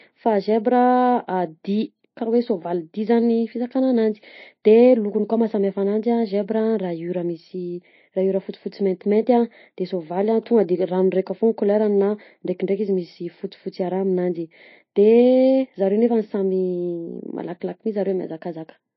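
Watery, swirling speech runs through the whole clip, with sibilants chirping metallically and nothing above 5.8 kHz. The cause is likely MP3 compression: a starved encoder cut the treble and let weak frequency lines flicker between frames, damage that fits a bitrate around 27 kbps.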